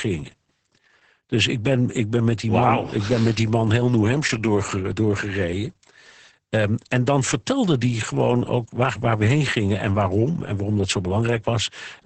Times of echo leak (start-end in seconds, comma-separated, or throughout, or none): none